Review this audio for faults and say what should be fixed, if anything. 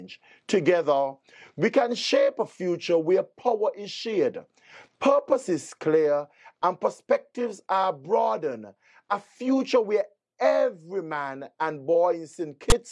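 A block of text tags was decoded as though it were sample data, so file tags played as audio at 12.70 s. The character bytes, read as sample values, cluster in a narrow range rather than centring on zero, producing a loud, hard-edged rasp offset to one side. It is a brief burst of static, cut off as abruptly as it starts. To prevent it, the player or converter should parse the container and stop reading samples at the declared end of the audio data.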